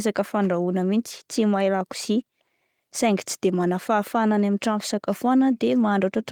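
No technical faults are audible.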